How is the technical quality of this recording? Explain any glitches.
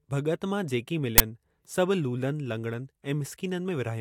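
One glitch stands out in the speech: an uninitialised buffer from 1.18 to 1.20 s. A 20 ms block was played before any audio had been written into it, so whatever data sat in that memory was output as samples. The result is an abrupt, very loud burst of digital noise that has no relation to the speech around it. Unlike a dropout from packet loss, which leaves silence or a smoothed gap, this fills the gap with harsh garbage.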